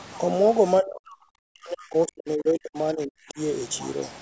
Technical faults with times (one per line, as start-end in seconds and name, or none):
0.80-3.39 speech suppressed in double talk